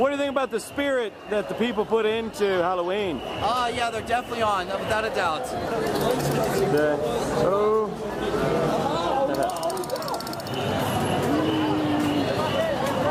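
Nothing here stands out as a technical fault; the audio just runs along without any trouble you can hear.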